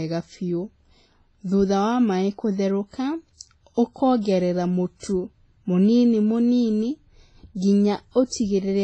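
WMA-style compression runs through the whole speech clip: the band stops at about 10.5 kHz, and a ringing, washy quality with hiss that swells and fades with the voice is heard throughout. That heavy damage is likely from a low-rate Windows Media Audio encode, which fits a bitrate around 24 kbps. Long transform blocks smear quantisation noise across tens of milliseconds, and the encoder drops weaker spectral lines entirely, leaving a thin, watery texture.

Pre-echo appears at 4.21 s, lasting about 39 ms to 4.25 s, and again at 4.97 s, spreading about 59 ms to 5.03 s. Both come from the same transform coding: a sharp onset lands late in a block, so noise scaled for the loud attack is spread back into the quiet stretch before it. Each attack is heralded by a brief hiss, and the onset itself sounds blurred rather than crisp.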